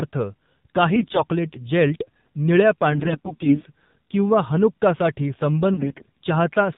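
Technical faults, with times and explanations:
throughout AMR narrowband mobile codec: The speech sounds muffled, buzzy and plainly synthetic, with nothing above 4 kHz. It is squeezed through the mobile speech codec's vocal-tract model at a low mode, and the coarse pulse coding fits a rate near 7.4 kbps.
0.94–1.23 s, 2.92–3.67 s, 5.74–6.10 s AMR bit errors: The voice briefly turns hoarse, scratchy and gargly while keeping roughly its pitch and loudness, worst in the last burst. Flipped bits in weakly protected parts of each frame misplace the excitation pulses and skew the finer settings.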